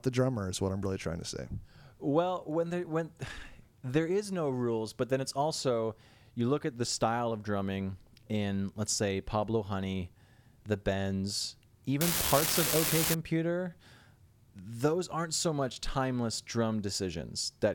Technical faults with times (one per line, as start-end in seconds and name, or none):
12.01-13.14 unreliable data bit